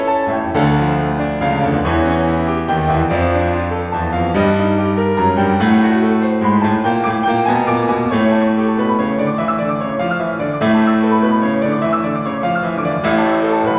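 No technical faults can be heard anywhere in this music. The sound carries on without any dropout, glitch or break in level from its opening to its close.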